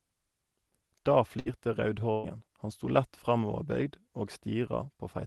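At 1.39 s the speech briefly smears into a held, fading sound, and again from 2.12 to 2.26 s for roughly twice as long, after which it jumps ahead. Both are bursts of packet loss on the call path: the receiver stretched the last sound it had for about 60 ms and then about 120 ms before playback resumed, dropping the audio in between. The codec's top end stops near 12 kHz.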